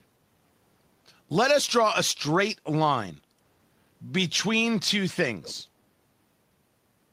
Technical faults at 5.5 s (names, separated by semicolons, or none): echo leak